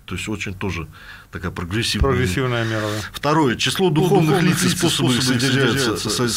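A doubled audio track enters abruptly at 3.99 s and runs to the end: a dry, full-band second copy of the sound trails about a fifth of a second behind, roughly 5 dB quieter, likely from a second, slower capture path mixed in.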